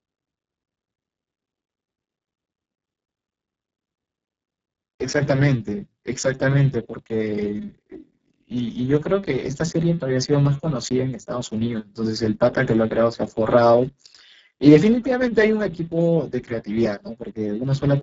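Speex codec damage runs through the whole speech clip: the excitation is starved of bits, so the voice sounds hoarse, noisy and close to robotic, which points to a very low setting near 6 kbps. Nothing remains above 7.7 kHz.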